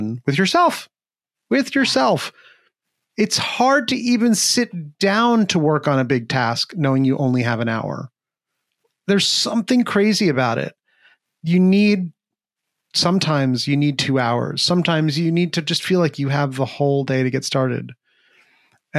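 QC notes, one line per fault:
Nothing stood out on listening to this speech recording.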